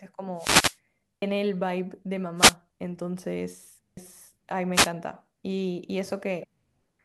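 A swish of static rises over the speech from 0.35 to 0.78 s. This is a wireless microphone noise hit: the analogue FM radio link fades as reflected signals cancel, and the receiver's own noise comes up to fill the gap.

At 1.22 s the sound jumps abruptly. Roughly 300 ms is gone, and the two sides are butted together with no silence between them.

Another, shorter burst of static follows from 2.37 to 2.55 s, again a dip in the radio signal.

At 3.97 s there is a second skip of the same kind. Together, the two skips are audio missing between chunks. Their spacing fits 3.0-second processing blocks, and the likely cause is the recorder dropping a piece at each block boundary.

A third wireless noise hit, a brief swish from 4.73 to 4.91 s, marks one more short fade of the transmitter's signal.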